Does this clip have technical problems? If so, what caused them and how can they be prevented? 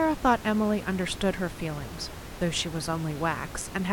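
No technical faults here.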